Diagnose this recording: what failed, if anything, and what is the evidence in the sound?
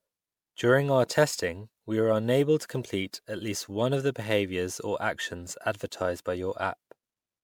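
The codec stage shows generation loss: the speech was most likely run through MP3 encoding about five times, at a rate that fits 128 kbit/s. Each pass re-quantises on a shifted frame grid, so the clip sounds swirly, hollow and smeared throughout, with softened consonant attacks.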